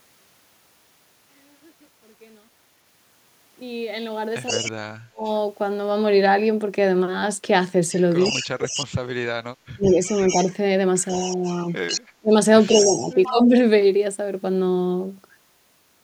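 A far-end echo canceller, likely running over a loudspeaker, lets its pickup leak back, so from 4.46 to 4.72 s an echo leak adds a delayed copy of the speech about 141 ms late, roughly 10 dB under the direct level. From 4.51 to 5.26 s, speech suppressed in double talk appears: the canceller, likely confused by both sides talking at once, ducks its own talker, carving dips as deep as around 35 dB across about 0.7 s. The echo leak returns from 7.94 to 8.86 s and again from 9.82 to 13.34 s, with the same 141 ms lag. Suppression runs from 8.31 to 13.54 s, affecting roughly two seconds.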